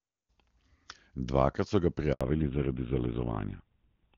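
A handover gap at 2.13 to 2.21 s, right after "so ga", silences the sound for 80 ms while the call switches networks and no speech frames arrive.

A fallback to narrowband follows from 2.21 s to the end: everything above 4 kHz vanishes, and the speech turns duller and rougher, which fits a drop from HD Voice to a GSM full-rate codec.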